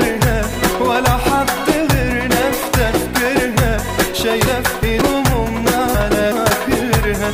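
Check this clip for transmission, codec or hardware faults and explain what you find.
Two moments of chunks out of order are present. The first runs from 4.46 to 5.02 s, the second from 5.94 to 6.50 s. In each, a block of about 186 ms was delivered late and plays two blocks after its proper place. No audio is missing, only misordered. The result is a brief jumbled stretch with three abrupt joins.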